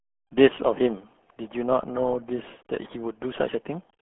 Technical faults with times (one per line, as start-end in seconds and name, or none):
0.00-4.09 RealAudio 14.4 codec